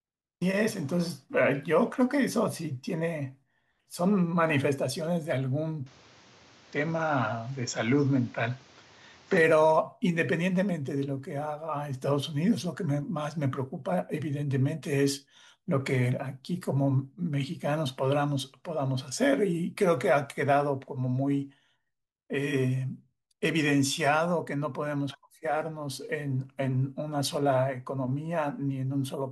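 From 5.86 s to 9.37 s the speech turns duller and boxier: everything above about 7.6 kHz disappears and a new background noise sits roughly 30 dB below the voice. The change is abrupt at both ends, with no gap and no shift in loudness, and the original clarity returns at 9.37 s. This points to an input switched to a poorer device, likely a different microphone. The fresh noise floor and altered tone, not just lost treble, set it apart from a simple filter or codec bandwidth drop.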